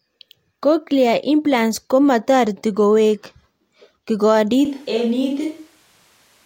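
At 4.65 s the speech turns abruptly roomy and hollow until the end, likely a switch to a distant microphone after the close one dropped out. The waveform steps down about 5 dB, and the spectrogram shows thinner low end and a raised noise floor roughly 35 dB below the speech.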